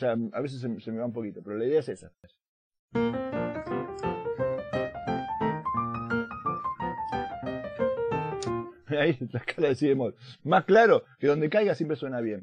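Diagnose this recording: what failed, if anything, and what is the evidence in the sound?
Nothing failed; no faults detected.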